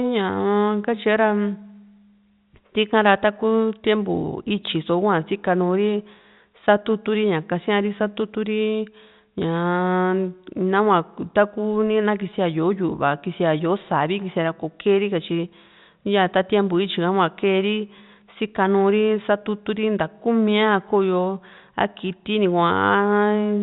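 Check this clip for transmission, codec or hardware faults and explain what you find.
No transmission, codec or hardware faults can be heard in the speech. What the listener hears is G.711 telephone coding working as intended: nothing above 4 kHz comes through, and at most a faint quantisation noise rides along with the level of the signal.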